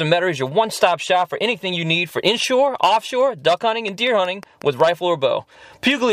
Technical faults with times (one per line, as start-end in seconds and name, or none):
3.88-4.81 train of clicks